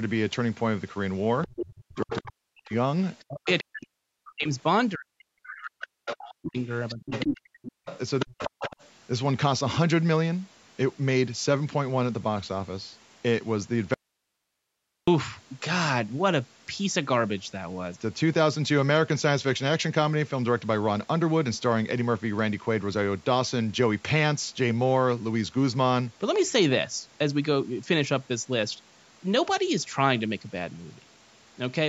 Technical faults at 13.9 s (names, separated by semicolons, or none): audio dropout to a faint residue